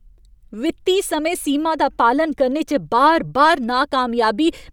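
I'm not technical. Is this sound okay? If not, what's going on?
Yes, the recording has no technical faults that can be heard anywhere in it.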